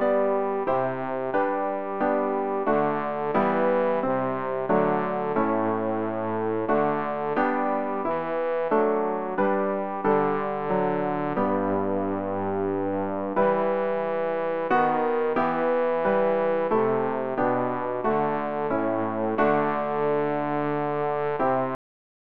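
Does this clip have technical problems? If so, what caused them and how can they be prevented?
Yes, the clip has a cut-off end. The final stretch of audio was never written out, most likely because the recording or export stopped before its last buffers were flushed. At 21.75 s the sound stops abruptly in the middle of whatever is playing, with no decay, and the remaining half second to the end of the file is digital silence. To prevent it, stop the recorder only after a short tail and make sure all pending buffers are flushed before the file is closed.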